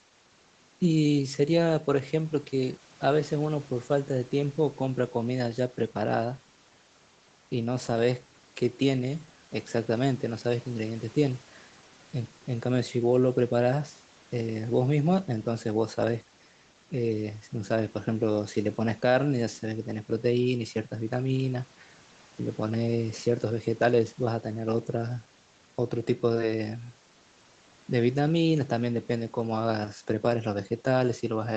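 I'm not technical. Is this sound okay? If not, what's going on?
Yes, nothing wrong here.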